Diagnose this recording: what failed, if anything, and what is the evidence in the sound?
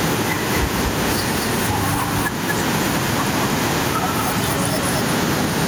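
Doubled audio track throughout: a dry full-band copy trails a fifth of a second behind, around 5 dB quieter, likely from a slower capture path.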